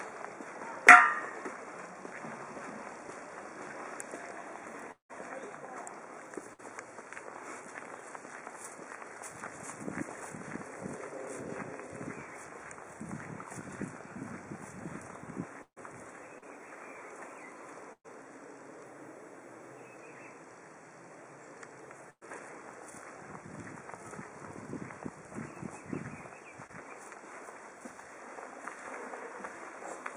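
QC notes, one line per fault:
4.91 to 5.11 s, long network dropout: About 0.18 s of audio is lost. The last sound carries on as a fading buzz, then about 0.12 s of silence follows. Audio returns past the gap. The likely cause is a long network dropout.
6.53, 15.63, 17.93 and 22.10 s, burst of packet loss: Four gaps lose 60, 140, 120 and 120 ms. Each time the last sound is held and turned down. The three longer gaps end in 80 to 90 ms of silence. At 22.10 s playback resumes 9 ms late.
16.38 and 26.67 s, short concealed packet loss: About 40 ms and 20 ms never arrive in time. The receiver stretches the preceding sound to fill each hole, then blends back. Each is a brief smear. At 16.38 s the fill runs a few milliseconds long.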